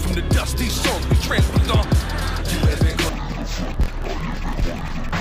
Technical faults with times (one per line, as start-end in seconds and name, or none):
3.09-5.20 interleaved audio read as planar